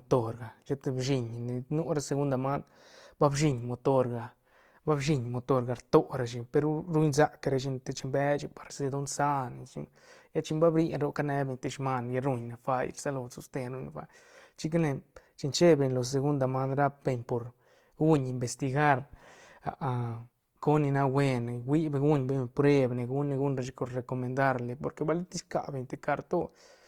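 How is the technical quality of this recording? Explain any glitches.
The recording carries plainly audible codec damage from start to finish. Throughout, the speech sounds grainy and rough rather than swirly, and the highs still reach about 20.2 kHz. That fits energy-preserving band filling at a low rate, likely Opus compression near 24 kbps, not MP3's hollow spectral holes.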